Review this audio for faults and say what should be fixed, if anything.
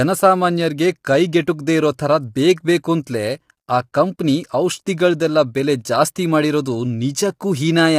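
Low-delay AAC compression is plainly audible across the whole speech clip as a rough, grainy texture. Short frames resolve pitch harmonics poorly, which fits AAC-ELD running at likely about 32 kbps. To prevent it, raise the AAC-ELD bitrate or record through a higher-bitrate path.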